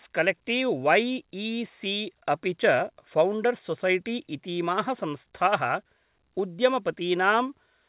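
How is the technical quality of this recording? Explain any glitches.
No glitches turn up anywhere in this speech, just the narrow, phone-like bandwidth with nothing above 4 kHz that you'd expect from a call path, which fits a standard telephone-band codec.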